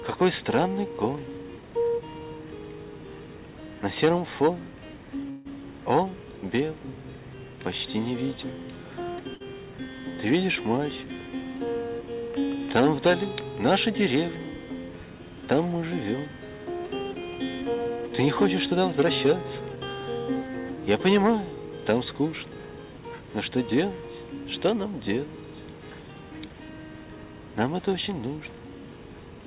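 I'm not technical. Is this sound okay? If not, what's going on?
No, there are a few call glitches. At about 5.3 s the sound stalls for roughly 0.15 s as a fading buzz or hiss, then picks up where it left off. That's a call audio freeze, likely from delayed packets. At 9.34 to 9.42 s there's a burst of packet loss: the last sound is briefly held and fades, then about 60 ms of sound is simply gone. From 18.02 to 19.26 s and 19.76 to 20.86 s, a jitter buffer speed-up runs things 7% and then 4% faster, trimming roughly 0.15 s in total, so the first part sounds hurried. The dull tone, with nothing above 4 kHz, comes from the ordinary phone-call path.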